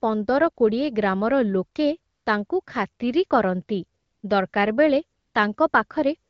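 Speech over an AMR-WB (HD Voice) link, which sounds like a fairly clean mid rate of around 12.65 kbit/s. The problem is AMR comfort noise: the phone decides the talker has gone quiet and stops sending speech frames, so the receiver swaps in smooth synthetic hiss at 2.13–2.25 s, 2.47–2.49 s and 2.63–2.65 s (both just before "ଖାତିରି କରନ୍ତି"), 3.99–4.23 s right after it, then 4.49–4.53 s, 5.19–5.33 s and 5.69–5.73 s. You hear the real background drop out and that steady wash switch in and out.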